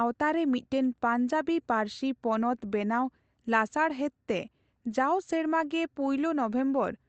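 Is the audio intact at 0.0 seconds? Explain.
Yes, the audio is intact at 0.0 seconds, with no fault at that moment.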